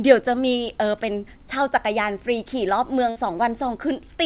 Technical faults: burst of packet loss

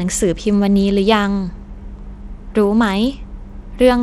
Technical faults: Bluetooth SBC compression

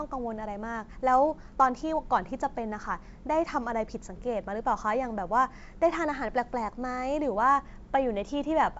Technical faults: none

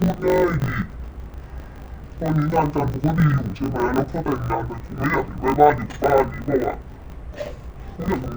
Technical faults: interleaved audio read as planar

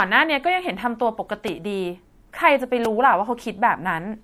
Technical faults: MP3 compression; repeated buffer

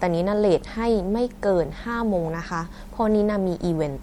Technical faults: MP3 compression

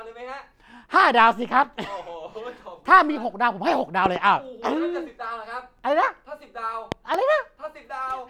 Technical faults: loud pop

